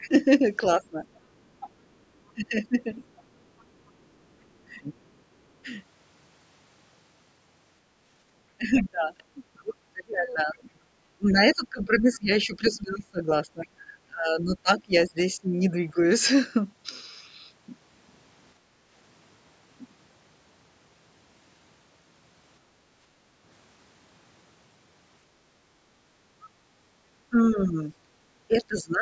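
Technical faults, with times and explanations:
0.0–15.98 s and 27.3–29.01 s, speech suppressed in double talk: with both sides talking at once, the echo canceller likely could not separate the near talker from the loudspeaker echo and so turned the microphone path down. The talker's speech sinks by as much as roughly 25 dB, in patches adding up to around seven seconds in the first span and about a second at the end.
1.15–3.91 s and 9.57–12.7 s, other side's voice leaking through: a second, fainter voice sits under the talker, likely loudspeaker sound the echo canceller failed to subtract from the microphone signal. It runs roughly 20 dB below the speech in the first stretch and closer to 15 dB below in the second, so it is more noticeable there.
1.94–2.05 s and 18.62–18.85 s, background gated by the echo canceller: while the loudspeaker was active, the canceller clamped the microphone hard, so the room tone briefly dips and then comes back when it releases. 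The first gap lasts about a tenth of a second and drops about 13 dB. The second is longer, about a fifth of a second, but shallower at about 7 dB.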